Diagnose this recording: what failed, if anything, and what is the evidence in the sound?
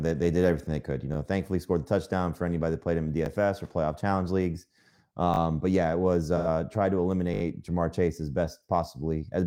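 Repeated buffer at 1.14, 3.26, 5.34 and 7.34 s: driver buffer underran, so a 20 ms piece replays one to four extra times with hard joins.

AAC frame loss with concealment, 6.37 to 6.47 s: the codec decoder filled roughly 85 ms from the last good spectrum, which fits two lost frames.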